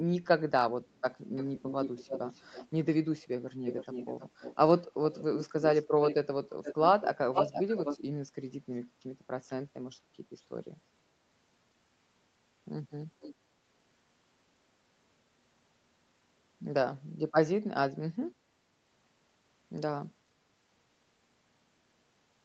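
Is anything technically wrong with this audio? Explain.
Yes. There is echo leak in this speech: a delayed copy of the voice comes back, most likely because a loudspeaker-side echo canceller let some of its microphone pickup through. It appears from 1.36 to 4.57 s and 5.11 to 6.15 s at a 316 ms delay, from 6.63 to 7.99 s at 476 ms, and as a faint 13.2 to 13.35 s scrap at 485 ms. The echo sits five to twenty dB below the speech. On a spectrogram, the syllable patterns repeat, shifted right and dimmer.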